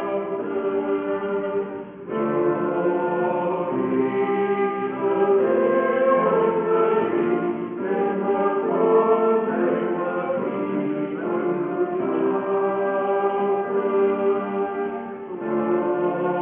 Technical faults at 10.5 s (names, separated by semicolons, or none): aliasing